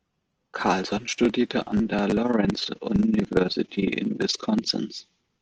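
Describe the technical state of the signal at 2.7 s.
At 2.7 s the signal carries overlap-add ripple, running from 2.23 s to 4.73 s, starting just after "studierte an der". The audio was split into windowed frames and rejoined with an overlap whose gains don't sum evenly, so the level dips by about 11 dB once per frame, around 20 times a second, giving a rough flutter. Unlike dropouts or gating, the dips are perfectly regular and never reach silence.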